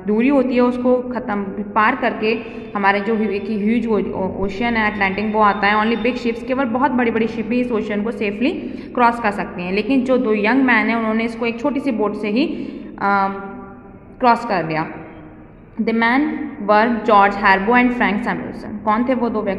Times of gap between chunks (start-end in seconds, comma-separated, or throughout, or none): none